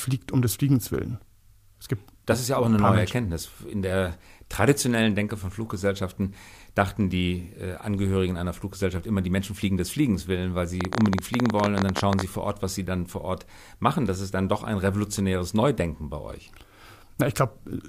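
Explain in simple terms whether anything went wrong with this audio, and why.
From 10.81 to 12.22 seconds, a rapid burst of sharp ticking cuts across the speech, about 18 clicks a second at an uneven pace, roughly thirty in all, each standing well above the voice. This is a train of clicks: a string of near-identical pulses forced into the signal for a moment. The likely cause is electrical interference from nearby equipment or a faulty connection or power supply.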